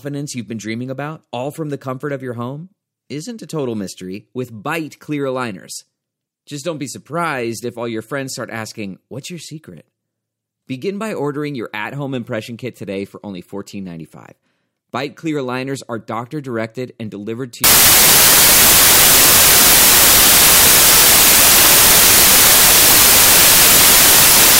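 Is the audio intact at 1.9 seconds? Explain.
Yes, at 1.9 seconds the speech is intact, with no dropout, click, distortion or other audible fault at that moment.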